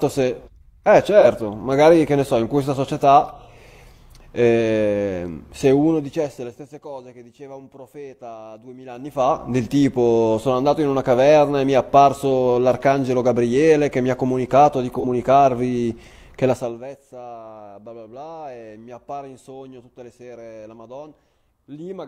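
Speech, with two short smeared, phasey patches of about 43 ms, at 1.21–1.26 s and 14.99–15.05 s. These are AAC frame loss with concealment: the decoder rebuilt the gap from the previous spectrum, which fits one lost frame. A fine ticking, zipping texture rides on the level as it falls by roughly 20 dB at 5.60–6.87 s and 16.49–16.83 s, and rises by roughly 20 dB at 8.87–9.45 s. This is zipper noise: the gain moves in unsmoothed steps, about forty a second, and each step clicks.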